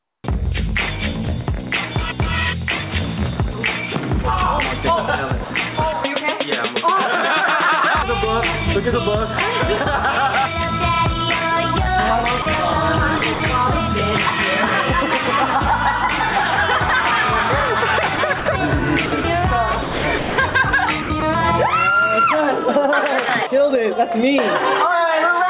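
The audio arrives band-limited over a call link, with nothing above 4 kHz, which fits a narrowband G.711 A-law path at 64 kbps. Gain pumping runs throughout, with the gain swinging by around 10 dB, likely from input gain set far too high and a fast limiter pulling it back. On a waveform the noise floor visibly rises between loud passages and collapses at each onset, and a spectrogram shows the background band brightening and darkening in step. From 0.0 to 0.24 s there is comfort noise in place of the background: the real ambience, sitting about 46 dB below the loud parts, is replaced by a smooth, featureless hiss about 3 dB quieter. This is likely because discontinuous transmission stopped sending during the pause and the receiver synthesised noise. A spectrogram shows a uniform, textureless smear there instead of the grainy real background. Sound is dropped by the voice detector at 5.44 to 5.50 s and 12.42 to 12.46 s, losing 60 ms and 40 ms respectively. 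The likely cause is that the detector judged quiet material to be background and stopped sending, so steady noise takes its place. Each shows as a short notch in the waveform envelope and a gap in the spectrogram, bridged by flat noise. Sound is chopped by the voice detector at 13.18 to 13.40 s, 18.16 to 18.46 s, 19.06 to 19.24 s, 19.82 to 20.54 s, and 21.02 to 21.22 s. Within each stretch, a total of 100 ms, and 440 ms in the longest, is swapped for synthetic fill as the detector toggles, likely from levels hovering near its threshold. The sound turns choppy. On a spectrogram this appears as alternating textured and smooth blocks with abrupt vertical edges.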